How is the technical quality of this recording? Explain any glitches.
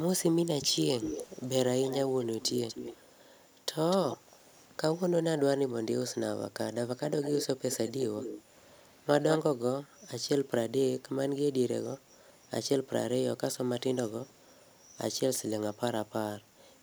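The recording has an echo leak: a delayed copy of the speech returns at 0.66–3.02 s, 3.45–3.56 s, 3.9–4.17 s, 7.22–8.42 s and 9.31–9.38 s. The lag is 243 ms in the first three and 200 ms in the last two. The echo is mostly around 10 dB below the direct speech, barely audible at 3.45 s and strongest at 9.31 s. This is likely a far-end loudspeaker whose echo canceller let residual pickup through.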